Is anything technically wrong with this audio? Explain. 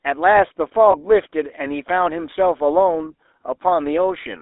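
Yes. Two faults are audible in this speech clip.

The GSM full-rate codec affects the whole clip. It models the vocal tract and excites it with sparse, regular pulses. The result is a plainly audible buzzy, gravelly roughness. The band is limited to roughly 300 Hz to 3.7 kHz, which fits a telephone line.

Lost GSM frames occur from 0.92 to 0.96 s. The decoder repeated the last good frame. The sound briefly holds with a rough, metallic ring. The short gap points to a single lost 20 ms frame.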